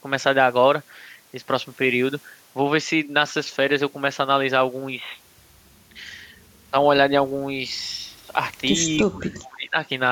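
From 9.0 to 9.77 s the speech drops sharply, sinking by something like 25 dB at its deepest across roughly 0.7 s. This is speech suppressed in double talk, likely caused by an echo canceller mistaking the talker for loudspeaker echo and attenuating both.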